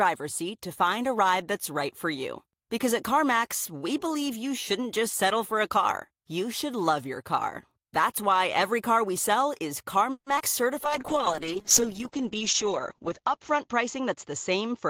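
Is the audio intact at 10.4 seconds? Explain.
No. Right after "car we sell is", from 10.36 to 10.42 s, there are two back-to-back short concealed packet losses (10.36–10.39 s and 10.39–10.42 s). About 20 ms and then 40 ms of audio failed to arrive in time. The receiver bridged each gap with roughly 10 ms of synthesized continuation before rejoining the real signal, and playout jumped ahead by roughly 30 ms. The result is a brief smear.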